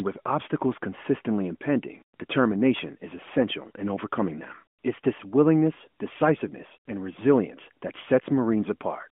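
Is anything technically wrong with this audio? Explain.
No, there is no technical fault here: this speech has the narrow telephone band of an AMR narrowband mobile codec link, roughly 200 Hz to 3.4 kHz, with only light coding texture, consistent with the codec's highest 12.2 kbps mode working as designed.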